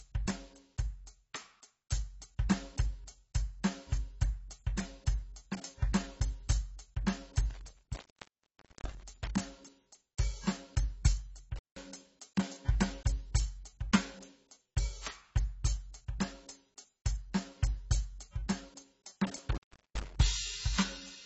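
From the first second the music stops dead at 8 kHz and carries a smeared, swirly coarseness. This is most likely low-bitrate audio saved at a high bitrate: a low-rate AAC encode re-saved as a large MP3, which keeps the old cut-off and artefacts rather than the clean top end a genuine high-bitrate file would have.

Intermittent contact interrupts the music at 7.50 to 9.30 s (open for about 0.88 s), 11.56 to 11.79 s (about 0.17 s) and 19.36 to 20.16 s (about 0.38 s). A loose connection briefly opens, so each gap begins and ends with crackle and holds faint hiss, unlike a digital dropout's clean silence.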